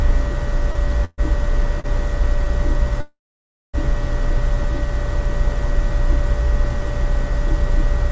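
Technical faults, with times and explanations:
0.72–0.77 s and 1.80–1.86 s, short stall from a late packet: a packet arrived late and the jitter buffer emptied, so the receiver stretched the last sound by 28 ms and then 39 ms. This held sound carries a faint buzz or dip, then playback resumes from the same point, with nothing lost.
1.05–1.20 s and 3.01–3.76 s, call audio freeze: playback halts and the last sound continues as a fading buzz or hiss, then falls to silence, for about 20 ms in the first and 570 ms in the second. The gaps add 131 ms and 730 ms of delay. The sound then resumes where it stopped, with nothing missing. Packets were likely held up in transit, draining the jitter buffer.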